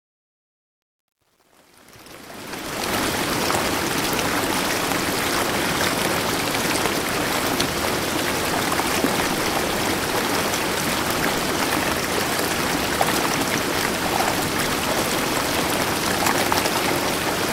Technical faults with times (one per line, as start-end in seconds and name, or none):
0.00-2.96 truncation distortion on a fade